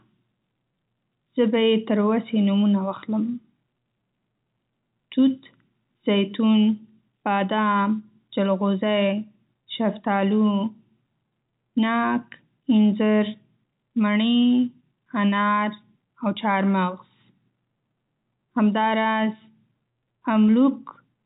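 There are no technical faults to describe in time order in this speech, which comes through G.711 telephone coding with nothing audible above about 3.8 kHz.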